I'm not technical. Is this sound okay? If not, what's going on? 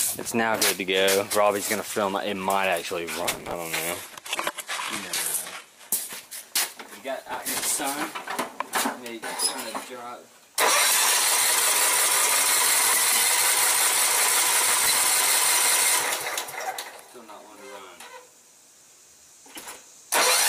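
No. Processor overload crackle appears at 3.25 to 3.54 s, 7.22 to 7.80 s, 14.69 to 15.04 s and 19.57 to 19.76 s. The computer was too busy to deliver dozens of tiny slices of sound, each a few thousandths of a second long, on time. Those slices were skipped, and the result is a gritty tearing burst.

An adaptive stream at a lower bitrate runs from 3.91 to 5.91 s. The connection slowed, so the player switched to a much smaller, lower-quality version of the stream. For those two seconds the sound turns dull, with its sparkle gone, and then snaps back without any gap.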